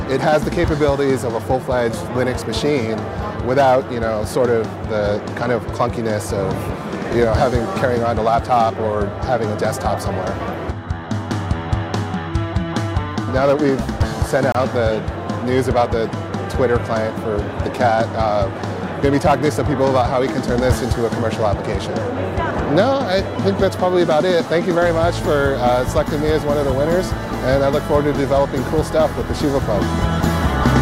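At 14.52 s the sound drops out for about 27 ms, until 14.55 s, then resumes exactly where it left off. This is a gap at a join of encoded pieces: two separately encoded segments were spliced without trimming, so one run's padded final frame and the next run's start-up delay both remain as silence. On a waveform it appears as a flat-line hole with steep, slightly softened edges; a spectrogram shows a thin vertical band of emptiness across all frequencies.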